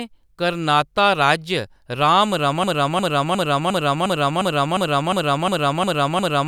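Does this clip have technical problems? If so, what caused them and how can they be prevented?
Yes. A broken-record loop runs from 2.64 s to the end. One 0.36 s fragment repeats 11 times and shows as identical tiled blocks on the spectrogram, likely from a stalled stream resending its last buffer. A watchdog that detects stalled decoding and switches to silence or reconnects, rather than replaying old data, prevents it.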